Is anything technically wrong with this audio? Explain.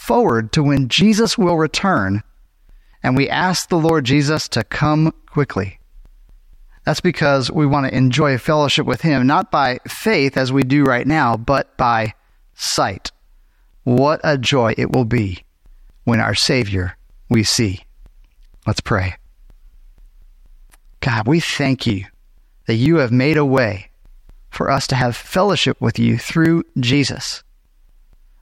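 Yes. From 0.29 s to 28.13 s, periodic USB or driver dropouts occur: something stalls the audio path every 0.24 s, and roughly 10 ms of speech is skipped each time. About a hundred evenly spaced ticks result, heard only while speech is present.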